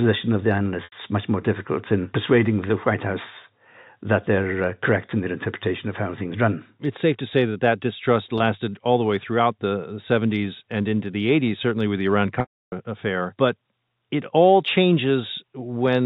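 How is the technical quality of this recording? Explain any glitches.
The recording comes through a G.711 telephone path, so nothing above 4 kHz is present. It has three dropouts, all packet loss with pitch repetition.

At 0.84 s (80 ms, about four 20 ms packets), 8.38 s (20 ms) and 12.40 s (320 ms), lost packets were bridged by looping the last pitch period. The short gaps sound like a brief buzzy hold. The long one fades to silence before the sound cross-fades back. On a spectrogram this shows as frozen, evenly spaced harmonic stripes, and at 12.40 s as a fading band followed by a blank stretch.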